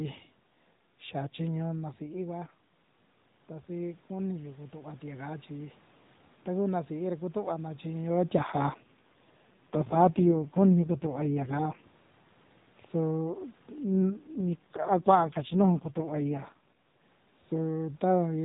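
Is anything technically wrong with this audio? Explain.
Yes, there are two kinds of fault in this speech clip.

Automatic gain rising, from 3.71 to 5.83 s, just before "taku na sií ra". The input level fell by about 11 dB, and the gain control answered by gradually raising its gain by about 4 dB over roughly two seconds. Voice and room noise swell together as the level creeps up, rather than the voice alone getting louder as it would if the talker moved closer.

AMR rate drop, from 8.38 to 11.84 s and again from 13.85 to 17.04 s. The mobile link weakened and the network pushed the AMR narrowband codec down to a lower mode, which fits a step from 12.2 to 4.75 kbps, freeing bits for error protection. The bandwidth stays the same and nothing drops out, but in both stretches the voice turns buzzier and more synthetic, then recovers when the higher rate returns.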